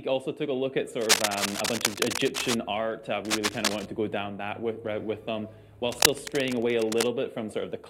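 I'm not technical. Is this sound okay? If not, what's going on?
No. Three times, a rough scratching, rustling noise sits over the sound, about as loud as the sound itself: from 1.01 to 2.54 seconds, from 3.25 to 3.86 seconds, and from 5.89 to 7.13 seconds. This is cable scratch noise. The likely cause is a worn cable, plug or knob being moved. Its electrical contact keeps breaking and remaking, which adds bursts of crackly noise while it moves.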